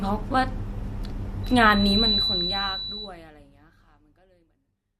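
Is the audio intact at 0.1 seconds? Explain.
Yes, the speech at 0.1 seconds is intact, with no fault at that moment.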